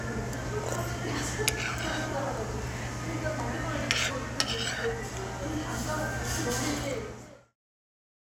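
At 3.11 s a single bit flipped in one sample, either in memory or on a digital link, so that value jumped by a power of two and immediately returned. It is heard as a bit error spike: one sharp, broadband tick unrelated to the surrounding sound, ahead of the smooth fade-out that ends near 7.57 s.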